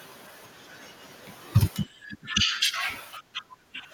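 A speech recording with speech suppressed in double talk, in two stretches: from 1.93 to 2.84 s and from 3.01 s to the end of the clip. In each, the level drops, by roughly 15 dB in the first and about 20 dB in the second. The likely cause is an echo canceller that could not tell the near talker from far-end echo while both were active and so attenuated everything.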